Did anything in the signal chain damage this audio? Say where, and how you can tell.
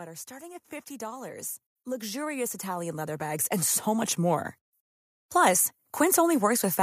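Yes, in call processing: automatic gain rising from 0.27 to 4.53 s, lifting level by about 17 dB. The AGC judged the input too quiet and ramped gain slowly. Background noise swells along with the speech, which rules out a talker moving closer to the microphone.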